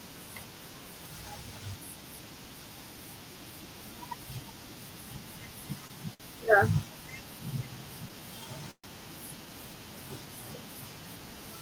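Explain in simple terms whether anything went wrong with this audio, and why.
Short stalls from a late packet at 5.87 s and 6.14 s: packets arrived late, so the receiver stretched the last sound about 23 ms and 60 ms, losing nothing.

A call audio freeze at 8.71 to 8.87 s holds the sound for about 128 ms, fading into a brief silence. Packets were likely held up on the way, and the speech then resumes where it stopped.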